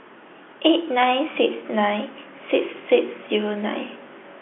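Nothing goes wrong anywhere in this one, just ordinary speech carried over a normal G.711 telephone line with its usual narrow band of roughly 300 Hz to 3.4 kHz.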